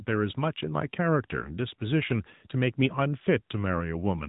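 From start to finish the speech has passed through an AMR narrowband mobile codec, coding at a rate that points to the 10.2 kbps mode. Everything above about 3.8 kHz is gone, so the voice sounds boxed-in and phone-like, with a plainly audible buzzy, synthetic edge.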